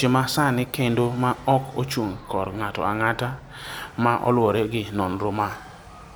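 Listening through this speech recording, nothing stood out as a technical problem at any point.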